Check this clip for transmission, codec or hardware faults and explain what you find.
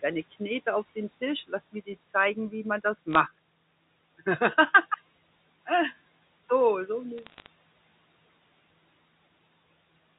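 There are bit errors on a digital phone line, in two bursts. The first is at 3.13 to 3.15 s, just after "zeigen wie man das". The second runs from 7.18 to 7.47 s. Flipped bits in the mu-law samples make sharp ticks, heard as brief crackle over the speech.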